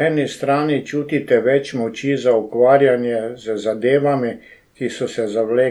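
Speech recording with no audible technical faults.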